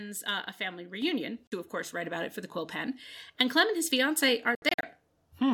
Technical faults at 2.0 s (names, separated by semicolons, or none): microphone volume stepped up